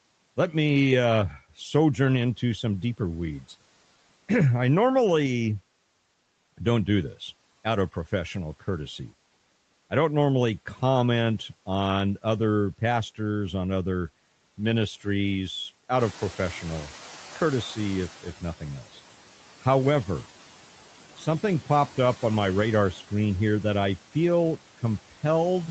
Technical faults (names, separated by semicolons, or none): noise suppressor artifacts; noise suppressor catching up